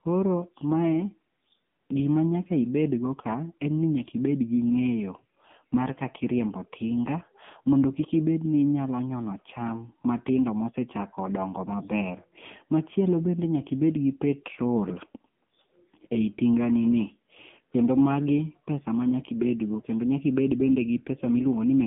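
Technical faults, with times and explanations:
Throughout, AMR narrowband mobile codec. Nothing above 3.5 kHz survives, and the band runs from 150 Hz to 3.4 kHz. The speech sounds buzzy and synthetic. A vocal-tract model rebuilds it from sparse pulses. The heavy damage fits a low rate near 6.7 kbps.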